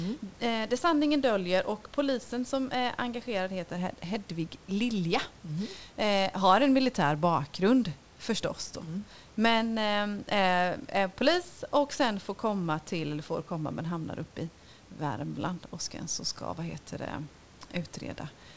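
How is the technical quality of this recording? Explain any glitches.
No glitches turn up anywhere in the recording; the speech simply carries the call path's usual character, with nothing above 8 kHz as you'd expect from a wideband call codec like G.722, and the room's background noise sits about 30 dB below the voice, which is just part of the space the microphone was in.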